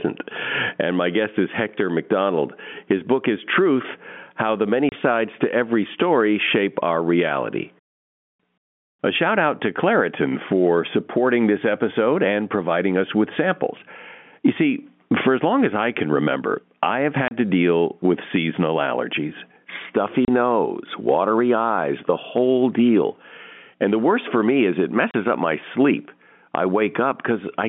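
Right from the start there's gain pumping. The sound is squashed, with loud and soft parts pulled closer together and the gain swinging around 20 dB, likely from gain set too high feeding a fast limiter. Then there's packet loss filled with silence at 4.89, 17.28, 20.25 and 25.11 s. Each is a hard-edged 30 ms hole, which fits a single dropped packet replaced by nothing.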